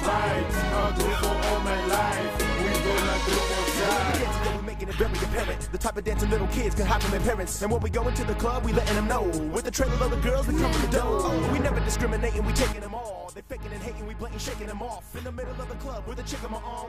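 Level drops abruptly, by about 4 dB from 4.56 to 4.98 s and about 10 dB from 12.73 s to the end, background included, likely sudden gain jumps with no ramp.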